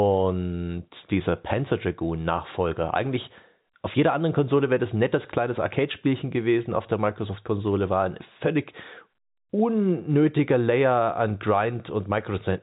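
No technical faults are audible.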